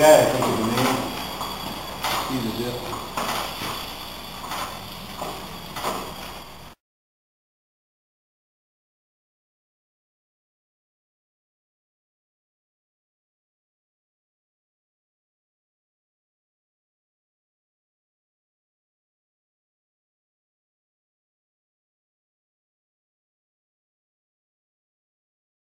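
From 6.43 to 10.52 s, one channel runs about 46 ms late, consistent with a 2048-sample buffer. Summed to mono, this channel delay produces an audible doubling, like a same-level slap echo.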